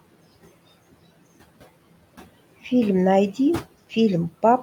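A speech recording with noise suppressor artifacts running through its whole length. The suppressor pulls the background down by about 17 dB in the gaps between words, so the room noise, sitting about 20 dB below the speech, drops away in pauses and surfaces again beneath each phrase as the per-band gain tracks the signal frame by frame.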